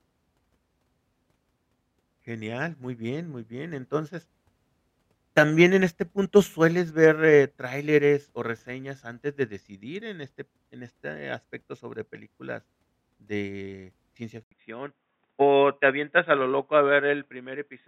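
At 14.43 s, just after "de ciencia", an 80 ms gap precedes a sudden change to the end: nothing above 3.8 kHz, a somewhat quieter level and a new faint noise floor, likely the input switched to a poorer device rather than a bandwidth drop within the same microphone.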